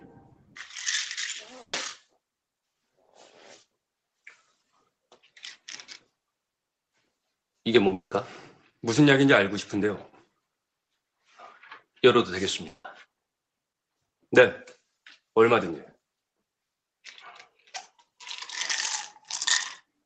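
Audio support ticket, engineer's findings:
Sound cut by the noise suppressor, 0.31–0.56 s. Level sinks by up to about 10 dB over roughly a fifth of a second. The suppressor misread steady or decaying content as noise and attenuated it harder than the surrounding material. Sudden onsets pass while sustained parts and tails get pulled down.

Burst of packet loss, 1.61–1.74 s. About 120 ms of audio is missing. The jitter buffer or decoder extended the last sound for 120 ms as a fading buzz or hiss, ending with about 30 ms of silence. Playback then resumes further along, so the skipped stretch never plays.

Short concealed packet loss, 7.87–7.90 s and again at 7.90 s. Two brief holes, 20 ms then 10 ms, with no clean recovery between them. The decoder's concealment synthesised continuation from the preceding pitch or shaped noise and blended back in. The result is a quick smear or wobble, and a short transient may drop out.

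Long network dropout, 7.93–8.12 s and 12.68–12.85 s. Gaps of 180 ms and 160 ms, likely an upstream network stall. Concealment holds and fades the last sound, then leaves silence of about 100 ms and 50 ms respectively. Audio returns further on with the intervening segment lost. The first event follows directly on the 7.87–7.92 s losses.

Path note: content tops out at 8 kHz throughout, consistent with Opus at around 32 kbps in a wideband call.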